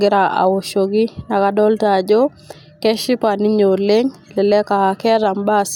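From 0.12 s to 5.72 s, clock slip clicks run through the speech: around 150 faint ticks, roughly every 40 ms, blurring into a soft rattle. Each is a single dropped or repeated sample, likely from two unsynchronised clocks about 500 ppm apart. A spectrogram shows evenly spaced thin vertical broadband lines, and the waveform shows tiny one-sample steps.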